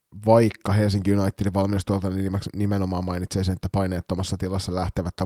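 No technical faults can be heard in this recording.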